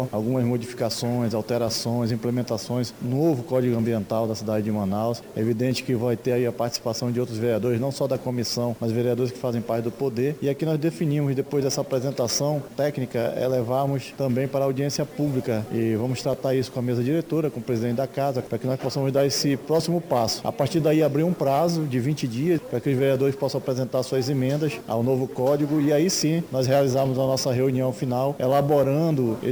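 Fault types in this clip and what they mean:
crude rate conversion: Samples were repeated by nearest-neighbour picking instead of filtered interpolation, in a pattern that fits a 32 kHz to 44.1 kHz step. Throughout the clip this leaves a gritty, inharmonic fizz about 25 dB below the sound, following loud, high content.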